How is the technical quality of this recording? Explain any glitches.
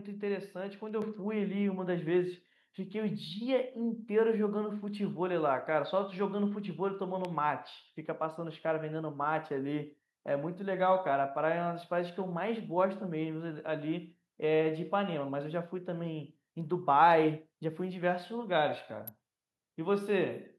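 The recording has three audible glitches: one level jump near the start and two sharp clicks later on.

At 1.02 s the microphone volume steps up by about 6 dB. The call software judged the input too quiet and raised the device gain at once, so voice and background get louder together.

At 7.25 s and again at 19.08 s there is an abrupt snap, most likely an electrical switching spike: a nearby switch or discharge arcing, with the pulse picked up by the audio line on top of the speech.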